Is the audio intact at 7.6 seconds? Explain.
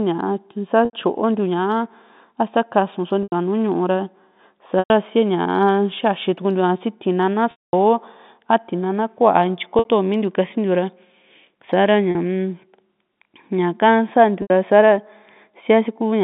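No. Packet loss with pitch repetition spans 7.51 to 7.73 s, a 220 ms gap. The last pitch period loops as a buzzy, held tone, fades over about 50 ms into silence, then cross-fades back. A waveform shows identical repeating cycles shrinking to a flat line, and a spectrogram shows frozen harmonics dissolving into a blank band.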